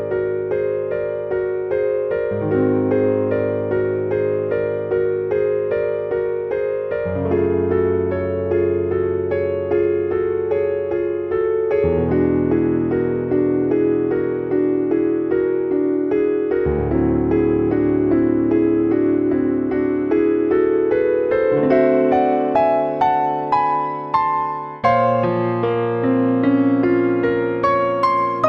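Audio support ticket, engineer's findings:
No faults found: signal path intact with no audible defects, level and continuity stable across the whole recording.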